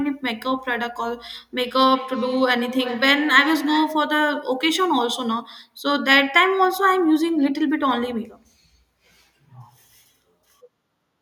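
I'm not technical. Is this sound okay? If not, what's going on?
No. From 1.58 to 4.11 seconds there is feedback echo between two devices. Two devices on the same call sit close together. One device's microphone picks up the other's speaker. So the speech returns a bit under half a second later, thinner and ringing.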